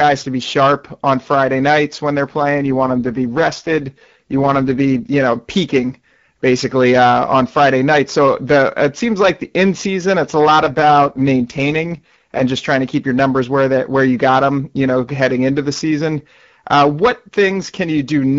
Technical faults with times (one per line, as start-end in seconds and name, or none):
0.00-18.39 hard clipping
2.40-5.10 AMR rate drop
10.63-12.42 AMR rate drop